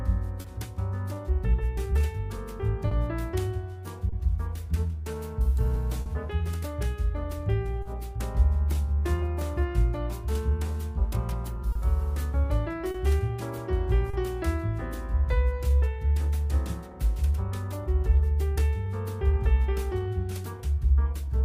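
A faint, uneven sense of the timing dragging runs through the whole clip, with small hitches that never settle into a regular beat. That is clock drift between sender and receiver: the sending clock runs roughly 3 percent slower than the receiving one. Audio arrives a little too slowly to keep the jitter buffer full, so the buffer keeps running low, and the receiver has to stretch or pad the sound to keep playing.

The first audible result is a short stall from a late packet at 0.41 to 0.46 s. A sound hangs on for an extra 30 ms with a slight buzzy hold, then carries on from exactly where it stopped, with nothing lost. The same held-sound hiccup returns at 2.88 to 2.93 s, 4.09 to 4.14 s, 6.02 to 6.08 s and 7.82 to 7.87 s. All are 30 ms except the one at 6.02 s, which holds for 40 ms. Each time, a packet missed its slot, the buffer emptied, and the receiver extended the last sound until the packet turned up, adding that much delay.

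Overlapping these, from 1.15 s to 20.76 s, repeated timing corrections leave the tempo slightly loose and unsteady, as if it sags now and then. Playback over this stretch runs at about 99 percent speed. The receiver keeps inserting small repeated slivers, always lengthening and never cutting, to stay in step with the slower sender. In total it adds around a third of a second.

Between 11.72 and 14.15 s, scattered short gaps show up as a few brief smears or ticks, about three of them, the longest roughly 30 ms. Packets arrived late here and there, and each small hole was bridged by continuing the preceding sound. About 100 ms in all, roughly 4 percent of that span, is patched this way, and nothing is actually missing.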